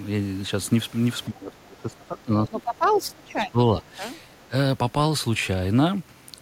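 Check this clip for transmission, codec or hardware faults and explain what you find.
Two echo-canceller faults appear.

Speech suppressed in double talk occurs between 1.26 and 4.03 s, dipping by about 20 dB across roughly two seconds in total, and briefly at 4.49 to 4.53 s, about 10 dB. The canceller likely mistook overlapping talk for echo and attenuated the speech.

The other side's voice leaks through at 2.95 to 3.01 s, about 15 dB below the speech, and faintly at 4.31 to 4.48 s, about 35 dB down. This is likely loudspeaker echo the canceller didn't fully remove.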